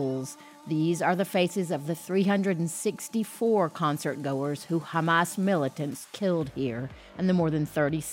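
Nothing technically wrong can be heard in this audio. No fault shows up at any point in the clip.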